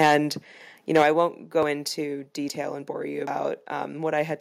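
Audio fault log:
0.00–0.15 s and 0.95–1.20 s, microphone overload: peaks run about 7 dB past the converter's limit and their tops are sheared flat, likely from input gain set too high, producing a harsh crackling edge.
1.02 s and 2.04 s, microphone volume stepped down: the whole level drops abruptly, by about 4 dB and then about 2 dB, likely the call software cutting input gain after the clipping.
1.63 s, 2.49 s and 3.27 s, dropped buffer (overrun): the sound jumps ahead, skipping about 20 ms at the first two and about 70 ms at the third, likely from samples overwritten before being read.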